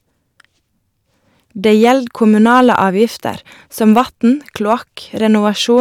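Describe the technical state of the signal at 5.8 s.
At 5.8 s the speech is hit by hard clipping, running from 5.77 s to the very end of the clip at 5.81 s. The signal is driven about 2 dB past what the stage can carry, so its peaks are sliced off flat. That mild overload is heard as a brief crackle on the loudest moments. On a waveform the peaks appear as flat plateaus, and a spectrogram shows harmonic energy smeared upward into the high kHz range.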